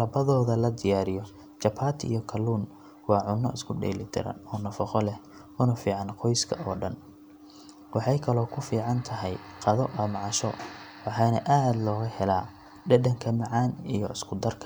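No faults detected anywhere in the recording; the speech runs without any technical defect.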